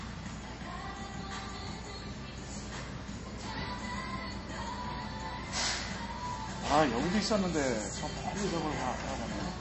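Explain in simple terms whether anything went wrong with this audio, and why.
Yes. The recording was most likely squeezed hard by MP3 compression, an encoder that saves space by discarding the parts of the sound it judges least noticeable. With too little room, it cut everything above 8 kHz and kept dropping faint details in and out. From start to finish, the everyday sounds here therefore come across as dull and lacking sparkle, with a plainly audible watery, swirling quality and softened, smeared onsets.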